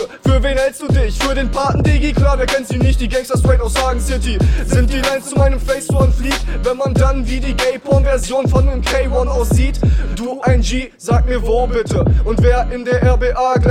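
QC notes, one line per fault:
No faults found; nothing to log.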